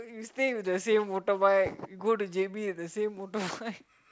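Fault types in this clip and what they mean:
No faults can be heard in this speech recording.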